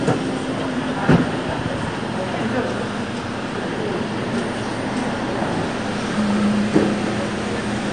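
AAC compression runs throughout this recording of sounds, likely from low-bitrate AAC-LC around 32 kbps. It leaves nothing above 9.8 kHz and plainly audible dull, smeared, warbling texture.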